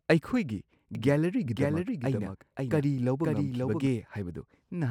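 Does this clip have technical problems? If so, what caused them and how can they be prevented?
Yes. From 0.95 s to 3.87 s the speech is heard twice, a doubled audio track: a second full-band copy trails by about half a second, a few decibels quieter than the original. This is likely one source captured again through a slower path, or two out-of-step copies in the edit. Unlike an echo, the copy has no decay or room colour and switches in and out abruptly. Monitor and route each source once, and check edits for overlapping duplicate clips.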